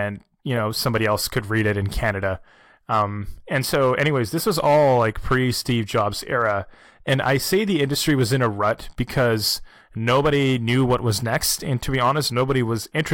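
Crackle on the loudest speech peaks throughout is hard clipping: the signal runs about 4 dB past a stage's limit, so occasional peaks are sliced flat.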